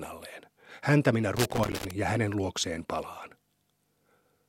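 Loose connector crackle runs from 1.37 to 1.91 s: a worn contact intermittently breaks the speech signal, chopping it into an irregular burst of scratchy crackle.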